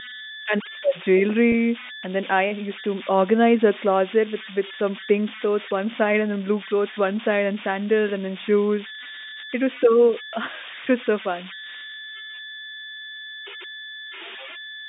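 Converter idle tones run through the whole recording. The converter was left without dither, so at low signal levels it settles into repeating bit patterns, and these produce a whistle somewhere around 2 kHz that can be heard in the pauses between phrases. Under quiet passages the same error shows up as a grainy texture. It sits only about 12 dB below the speech, so it never really disappears behind the talker.

From 1.52 to 1.54 s there is packet loss with pitch repetition. About 20 ms of audio is missing, which fits a single lost packet. The receiver covers the gap by repeating the last pitch period of the speech. Because the gap is this short, the fill is heard as a brief held, slightly buzzy note rather than a dropout. Across the clip, the G.711 A-law telephone coding limits the band to about 200 Hz to 3.7 kHz.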